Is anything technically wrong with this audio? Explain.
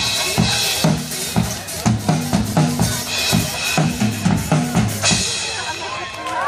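Yes. MP2 compression runs throughout: the sound is dull and carries a gurgling, granular texture, likely from MPEG Layer II coding at a low rate consistent with about 80 kbps, where upper sub-bands drop out and the remaining bands are coarsely quantised.

DAB burbling appears at 0.33 to 0.82 s, 2.31 to 2.53 s and 5.80 to 6.17 s. Bit errors slip past error correction into the audio data, corrupting samples so short blips of noise appear in single sub-bands, and corrupting scale factors so sub-bands jump in level for up to a frame. This produces bubbling, squelchy chirps in the heavier bursts and a few watery blips in the lightest. The middle burst is the mildest.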